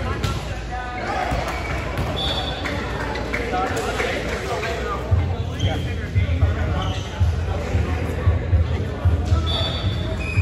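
From 0.52 to 1.11 s the audio slows by 6.35% and drops about 114 cents, a little over a semitone, then snaps back to normal pitch and pace. From 4.44 to 5.33 s the opposite happens: a 6.35% speed-up and a rise of about 107 cents. This is likely a drift correction step, where clock-matching software abruptly changes the playback rate to drain or refill its buffer, so pitch and timing shift together.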